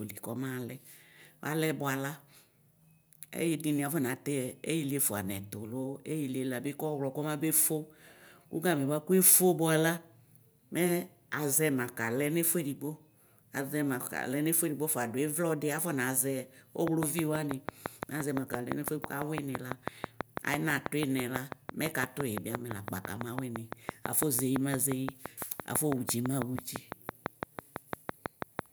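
From about 16.88 s to 28.60 s there's a train of clicks, around 70 of them at a steady six per second, sitting well above the speech. It ticks right through the pauses, so it's likely interference from nearby gear or a faulty connection or power supply.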